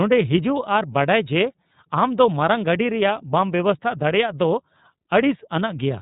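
iLBC codec artefacts run throughout the speech: each 30 ms frame is coded independently, leaving it rough and synthetic, with nothing above 3.8 kHz, which fits a 13.33 kbps stream.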